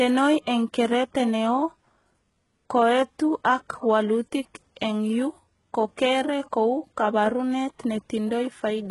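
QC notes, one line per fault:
Throughout, HE-AAC compression: the speech has bright but gritty, metallic treble, with s sounds turning lispy, and nothing at all above 11.5 kHz. This is likely spectral band replication: only the lower band is really coded, and the upper band is copied up from it and shaped by a coarse envelope, so its harmonics do not line up with the real ones. The heavy damage fits a very low bitrate of around 12 kbps.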